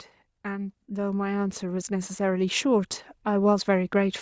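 From 0.43 s to 4.17 s the speech gets steadily louder as automatic gain rising sets in: the gain control judged the input too quiet and kept raising its gain, adding about 8 dB over those seconds. The background climbs along with the speech, which separates this from a talker moving closer or speaking up, where only the speech would grow. The rise is slow and smooth rather than a sudden step, and the call's microphone processing passes nothing above 8 kHz.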